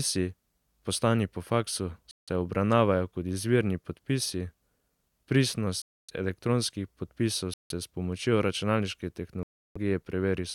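The speech drops to dead silence four times, at 2.11 to 2.29 s (after "poslani po faksu", resuming on "obravnavajo kot izvirni"), 5.82 to 6.10 s, 7.54 to 7.72 s and 9.43 to 9.77 s (after "pomočjo računalniške"). Gaps run about 170 to 330 ms, then pick up again. That's likely a Bluetooth stall, the headphone buffer running dry while delayed packets were resent.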